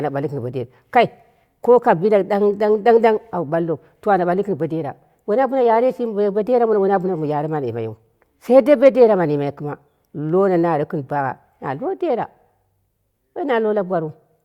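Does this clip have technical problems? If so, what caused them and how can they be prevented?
No, no technical faults heard.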